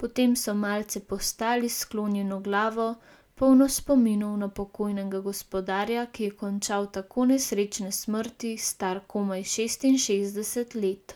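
Listening closely to the speech recording, nothing stood out as a technical problem at any point.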